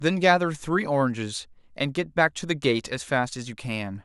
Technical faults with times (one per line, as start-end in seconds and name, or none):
none